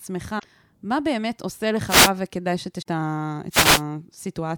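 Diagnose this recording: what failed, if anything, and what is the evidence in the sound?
Damaged data in a compressed stream, at the codec stage: bursts of damage at 0.35–0.45 s and 2.78–2.87 s as the decoder loses frame sync, showing as ragged spectrogram blocks.

Wireless microphone noise hits, in the analogue radio link: signal fades let receiver static swish in at 1.87–2.11 s and 3.50–3.82 s, a broadband hiss veil on spectrograms.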